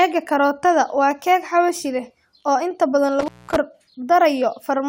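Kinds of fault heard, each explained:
Intermittent contact: a loose connection briefly opens, so after "leh oo inta badan" the speech drops out for about 0.2 s around 3.20 to 3.56 s, with crackle at both edges.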